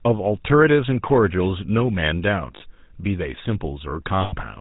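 GSM full-rate codec coding runs through this whole speech clip: everything above 4 kHz is missing and the voice has a buzzy, gravelly roughness, which fits the 13 kbps pulse-excited coder. Lost GSM frames occur at 2.56 to 2.63 s and 4.22 to 4.34 s, where the last good sound is held as a rough metallic ring, fitting roughly 40 ms and 100 ms of missing frames.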